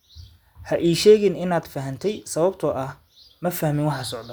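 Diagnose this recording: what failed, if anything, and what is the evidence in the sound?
Nothing failed: no stage in the chain, from capture through to playback, leaves an audible fault anywhere in the speech.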